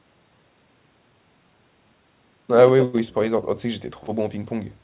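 No technical faults can be heard anywhere in the speech. It came over a WebRTC call path working as expected, with nothing above 4 kHz, which fits G.711 A-law coding at 64 kbps.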